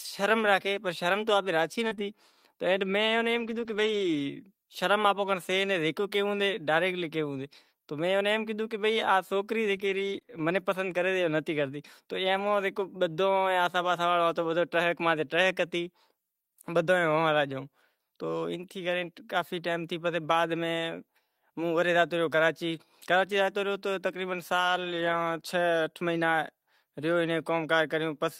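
At 1.87 s a brief smear runs to 1.93 s, and a second smear follows at 1.95 to 1.99 s. This is short concealed packet loss. About 40 ms, then 20 ms, never arrived in time, and the decoder covered each hole by extending the preceding sound before blending back. Part of the first hole, 1.91 to 1.93 s, is a lost packet rebuilt from error correction, a rougher, noisier patch.

From 3.35 to 4.21 s the audio turns grainy and noisier in stretches, about 0.44 s in total. Here too lost packets were rebuilt from error correction. Each missing packet was replaced by the low-bitrate copy carried in the next one, so nothing drops out, but the rebuilt frames are coarser.

Between 9.75 and 12.50 s there are scattered short gaps, roughly three small hiccups or ticks, the longest around 30 ms. Isolated packets went missing there and were each patched by continuing the last sound, with some rougher rebuilt stretches in between.

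From 24.56 to 25.14 s the same rough, noisy texture returns, about 300 ms of lost packets rebuilt from error-correction copies rather than gaps.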